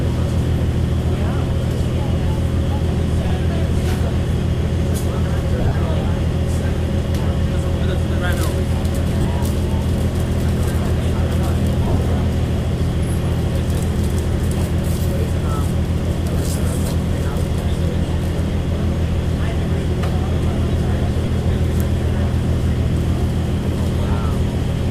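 Lost LE Audio frames show up around 3.24–3.30, 5.61–5.75, 9.22–9.25, 11.83–11.98 and at 21.25 s. Each time the decoder papers over the gap by replaying the last spectrum with scrambled signs, so tonal bits smear into brief noisy patches, with light lossy compression underneath.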